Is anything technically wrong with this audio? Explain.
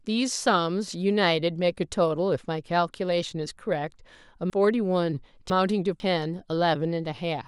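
Yes. Between 4.5 and 6.0 s the speech becomes briefly jumbled. This is chunks out of order: a 500 ms segment arrived late and plays two chunks after its proper place. Nothing is missing, but the order is scrambled and there are three hard edits.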